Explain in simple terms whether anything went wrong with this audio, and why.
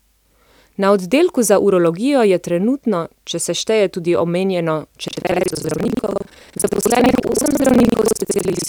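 From 5.06 s to the end of the clip, the speech takes on a harsh, robotic rattle, a steady buzz about 21.5 times per second that sounds only while someone is talking. This is buffer tearing. The program filling the audio buffer and the hardware playing it have fallen out of step, so a bit under half of each chunk replays sound from about a tenth of a second earlier, with abrupt joins. The buzz rate fits a 2048-sample buffer.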